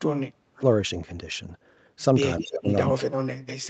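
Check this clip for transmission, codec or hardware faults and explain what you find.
Two call-path faults appear, both tied to the echo canceller.

Speech suppressed in double talk, from 0.0 to 0.63 s, 2.41 to 2.68 s and 2.91 s to the end: the speech sinks, by roughly 40 dB at its deepest (about 20 dB in the middle stretch), likely because the canceller ducked everything while both sides talked.

Echo leak, at 2.39 to 2.43 s and 2.70 to 2.93 s: a fainter copy of the speech returns about 215 ms late, at about 15 and 10 dB down, likely loudspeaker pickup the canceller missed. The fixed delay separates it from room reverb.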